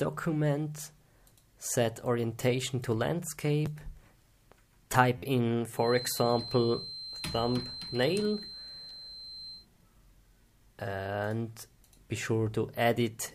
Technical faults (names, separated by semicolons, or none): repeated buffer; feedback whistle